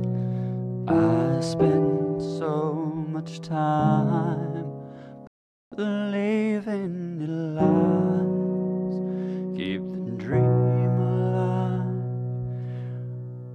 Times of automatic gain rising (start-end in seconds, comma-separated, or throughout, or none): none